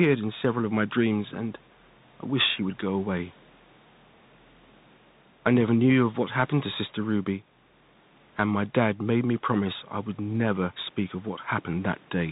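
From start to finish the speech carries the sound of a Bluetooth CVSD headset codec: each sample is coded as a single up-or-down step whose size adapts, which fits a 64 kbit/s link, and the damage is plainly audible. Sibilants turn scratchy, loud bright syllables smear where the step cannot keep pace, and a grainy hiss sits beneath the voice, apart from the quieter room noise about 32 dB down. A spectrogram shows a hard ceiling near 4 kHz and speckled energy filling the gaps.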